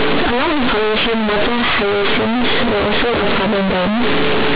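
From start to finish the speech comes through as very loud, buzzy distortion, with quiet passages as large as loud ones and strong noise filling the pauses. It is companded audio read as linear: mu-law telephone bytes are being played as plain 8-bit samples without expansion, so every sign change swings the waveform across half its range.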